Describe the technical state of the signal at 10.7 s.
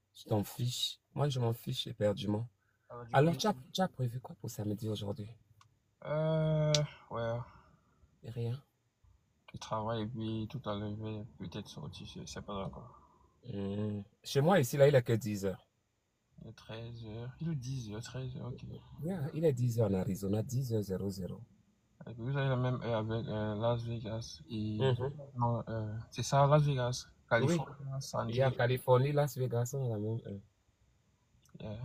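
No fault is audible at 10.7 s, and the signal there is intact.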